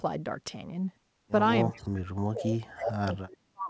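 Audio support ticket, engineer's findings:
Speech suppressed in double talk, 1.75 s to end of clip: speech dips and breaks up, deepest drop about 40 dB. Likely the echo canceller, unable to tell near-end talk from loudspeaker echo, attenuating both. Band-limited to 8 kHz, consistent with a wideband call codec such as G.722.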